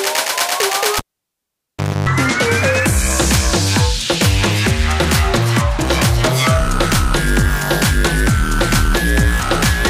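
A cable pulled and plugged in runs from 0.98 s to 2.09 s. The live lead is yanked out, giving a sharp pop, and the signal drops to near silence for about 1.06 s. As the plug goes back in, only the tip makes contact at first, so a 50 Hz mains buzz bleeds through for roughly 0.28 s before full contact lands with a second pop and the sound returns.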